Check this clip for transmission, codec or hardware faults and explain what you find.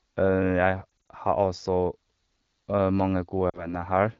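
The clip has one kind of fault, lost AMR speech frames, occurring twice. The wideband coding around it sounds clean, which fits a rate of about 12.65 kbit/s.

Between 0.90 and 1.10 s, just before "har også", the speech warbles and dips in short stutters. Five frames, 100 ms in total, are lost across about 200 ms, with no gap longer than 40 ms. A second, smaller wobble comes between 3.49 and 3.82 s, where two frames (40 ms) are lost. Radio errors corrupted these frames, so the decoder filled each gap by repeating the last good pitch and vocal tract settings at falling gain. That concealment produces the smeared, momentarily weaker sound before clean decoding resumes.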